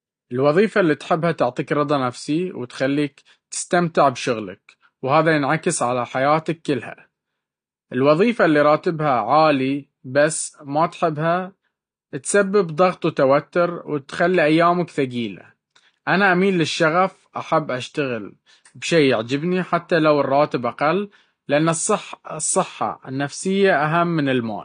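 Throughout, the speech has likely been through AAC compression at a low bitrate, consistent with AAC-LC near 32 kbps, which discards the top band and quantises the rest coarsely. Nothing remains above 9.6 kHz, so it sounds dull, with plainly audible smearing.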